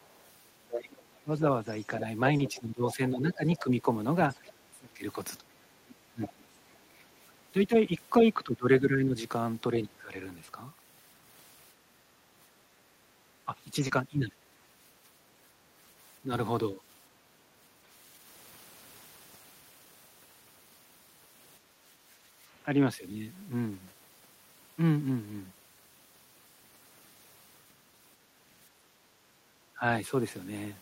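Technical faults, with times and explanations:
0.02 to 6.78 s, other side's voice leaking through: a second, far-end voice sits under the talker, roughly 15 dB quieter. The likely cause is a loudspeaker playing the far end into the microphone, with the echo canceller leaving a residue.
1.23 to 10.14 s, 13.45 to 16.8 s and 29.76 to 29.84 s, speech suppressed in double talk: the talker's level dips and breaks up while both sides speak. The deepest drop is about 20 dB in the first stretch, totalling around 4 s, and about 15 dB in the second. The last is a brief 10 dB dip. This is likely the echo canceller, unable to separate the talker from the echo, turning everything down.
2.37 to 2.41 s, 10.45 to 10.49 s and 13.87 to 13.91 s, short concealed packet loss: each is a tiny smear or wobble where 20 ms of audio never arrived. The receiver extended the preceding sound to bridge the gap, then blended back into the real signal.
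7.04 to 7.17 s, 21.6 to 22.4 s and 28.7 to 29.48 s, background gated by the echo canceller: the room tone briefly sinks, by about 8, 9 and 7 dB respectively, then recovers. The canceller clamped the microphone hard while the loudspeaker played and released it afterwards.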